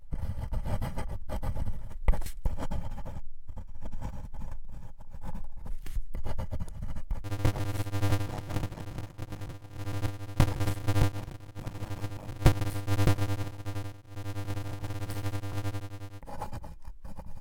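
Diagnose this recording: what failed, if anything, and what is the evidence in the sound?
A buffer-stage block size mismatch (padded), likely from 256-sample writes zero-filled into larger reads, fits 480-sample blocks. From 7.24 to 16.21 s, a 100 Hz buzz appears and the sound slows to 0.533 speed.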